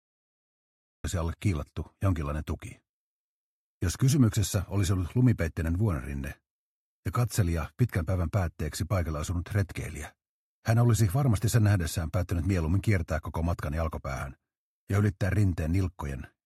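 The clip opens with a cut-off start: digital silence runs from 0 to 1.04 s, then the sound appears already in progress, with no natural attack or fade, because capture began late. The waveform is flat until a sudden edge, and the spectrogram shows a blank stretch ending in a sharp vertical boundary.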